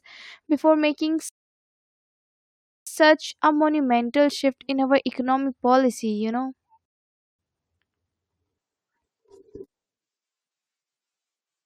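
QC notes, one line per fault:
1.29–2.87 s and 6.86–7.39 s, rebuffering stall: the player drained its downloaded audio and halted playback until more data arrived, so the speech drops to dead silence after "before making" for about 1.6 s, then resumes cleanly on "a monumental shift in". The second gap, after "economic policy you know", lasts about 0.53 s. No speech is lost; each pause adds its full length to the running time.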